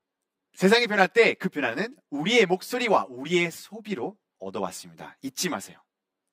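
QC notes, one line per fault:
Throughout: channel delay (comb filtering); one channel lags around 10 ms before mono summing, carving fixed notches from about 50 Hz; hollow, unswept, unlike flanging.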